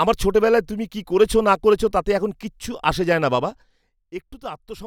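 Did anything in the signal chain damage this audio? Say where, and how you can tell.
Yes. Zipper noise from 3.32 to 3.96 s: a gain stage cuts the level by roughly 15 dB in unsmoothed 2 dB jumps, around 15 a second, each ticking audibly. The waveform envelope descends as a staircase, and the spectrogram shows faint broadband vertical lines.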